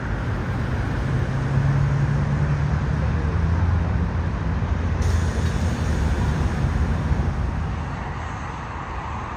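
Throughout, a doubled audio track trails the original by roughly 0.7 s, about 10 dB quieter, likely a second capture path; unlike echo, it is one full-band copy with no decay or room colour.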